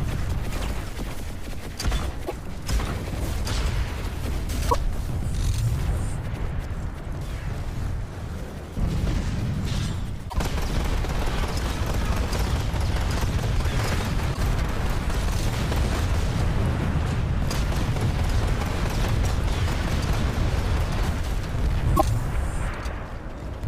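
Damaged data in a compressed stream breaks the audio five times, for about 80 ms each, at 2.24, 4.66, 10.26, 14.30 and 21.93 s. Corrupted frames make the decoder misread and resync, giving short glitches that show as brief broadband smears and ragged waveform discontinuities.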